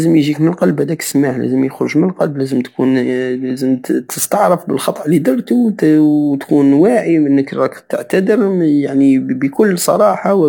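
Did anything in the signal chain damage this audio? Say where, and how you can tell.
No, nothing in the signal chain has left an audible mark on this speech recording. Listening through, I can't point to any stage from capture to playback where the sound has been altered.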